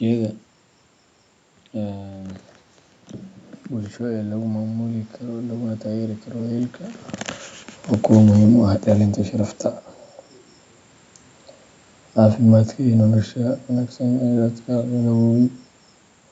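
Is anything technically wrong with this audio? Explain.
Yes. From 3.72 to 7.09 s the voice and the room noise swell together, climbing about 6 dB over several seconds. This is automatic gain rising: after the talker moved away and the input fell about 12 dB, the gain control slowly raised its gain to compensate.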